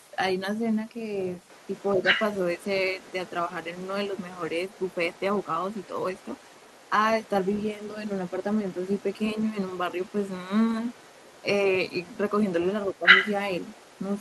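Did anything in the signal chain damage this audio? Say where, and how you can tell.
Yes. Other side's voice leaking through: a second voice sits under the speech from 0.0 to 6.9 s, 7.22 to 10.34 s and 10.82 to 11.44 s, about 25 dB down. From 11.86 s to the end it is louder, only about 10 dB below. This is call processing: the far end played from the loudspeaker reached the microphone, and the echo canceller likely failed to subtract all of that acoustic path.

Speech suppressed in double talk: at 1.94 to 2.03 s and 12.93 to 13.06 s, while the leaked voice overlaps the talker, the near speech briefly dips by roughly 5 dB for about a tenth of a second or less. The echo canceller's suppressor likely could not separate the two voices and pulled the whole signal down, taking some of the talker with the echo.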